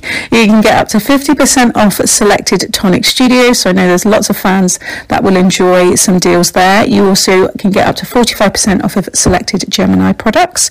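From start to finish, the signal is driven about 16 dB past what a stage in the chain can pass, so peaks are sheared flat in hard clipping across roughly a fifth of the waveform. The squared tops spray high harmonics, giving every loud moment a harsh, buzzing fuzz.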